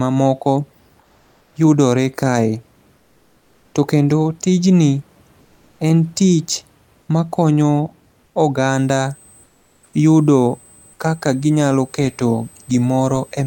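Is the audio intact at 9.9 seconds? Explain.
No. Two faults overlap at 9.9 seconds.

A switching supply whistle runs from 8.69 s to the end of the clip. It is a thin, high tone between about 8.1 and 8.3 kHz, sitting roughly 30 dB below the speech. A power supply's converter is cycling at an audible rate, or beating against another supply. That puts a high whine into the audio path.

Comfort noise in place of the background covers 9.43 s to 9.93 s, so 9.9 s falls at its very end. For half a second the natural room noise vanishes. A smooth, featureless hiss about 8 dB quieter takes its place. The likely cause is discontinuous transmission, which points to an Opus-style codec. The sender went silent during a pause. The receiver then filled the gap with synthetic noise shaped only roughly like the real background.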